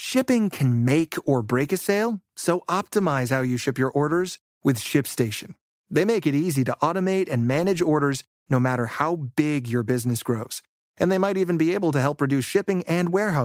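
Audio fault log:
No faults heard anywhere in the speech.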